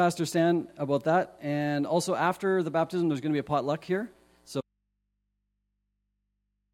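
An audio dropout to a faint residue begins at 4.61 s and lasts to the end. The sound cuts off abruptly in mid-flow rather than fading. What remains is a low mains hum, roughly 50 dB below the previous level. The likely cause is the wanted signal being lost upstream while the input stayed open and live, so the gap fills with hum from the unterminated connection instead of true silence.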